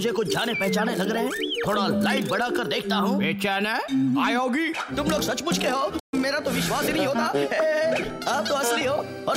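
The audio has a playback stall from 5.99 s to 6.14 s, where the sound halts mid-flow and the output falls silent for about 133 ms. That is too long to be a click or momentary dropout. The likely cause is the player running out of data or its thread being blocked.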